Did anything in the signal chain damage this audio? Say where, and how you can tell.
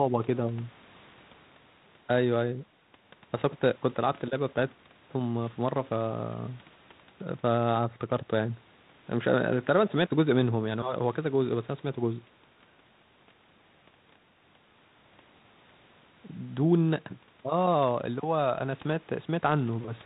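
No, the speech passes through a G.726 ADPCM stage at 32 kbit/s, which confines it to the telephone band below 4 kHz and adds only the light coding texture expected at that rate, with no damage from any stage of the chain.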